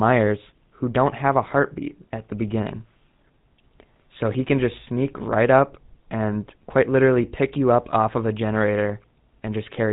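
Speech, carried from start to finish through a GSM full-rate codec, and the damage is plainly audible. The codec rebuilds the voice from a vocal-tract model excited by evenly spaced pulses that keep only every third excitation sample, which gives the voice a buzzy, gravelly roughness throughout. Nothing above 4 kHz survives, so sibilants and consonant detail are dulled. The overall character fits the original 13 kbps GSM speech codec.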